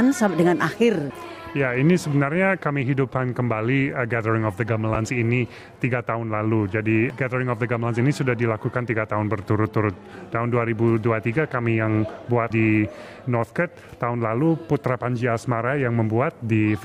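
A brief jumbled moment at 4.95 s: chunks out of order, where a 5.8 ms chunk played one chunk late, leaving hard joins.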